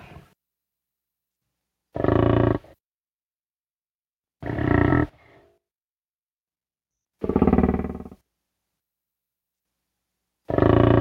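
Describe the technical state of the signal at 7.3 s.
At 7.3 s the signal is intact, with no dropout, distortion or other technical fault to be heard at that moment.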